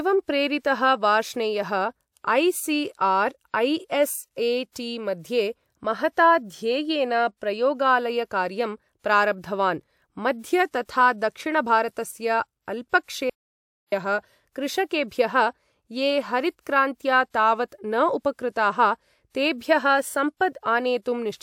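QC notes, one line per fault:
4.70–4.76 s, pre-echo: about 54 ms of hiss creeps in just ahead of an attack, because the codec spread that block's quantisation noise back over the quiet lead-in.
13.30–13.92 s, audio dropout to silence: the speech cuts out for about 625 ms of dead silence with no room tone, likely from input lost through a disconnected device, failed link or stray mute.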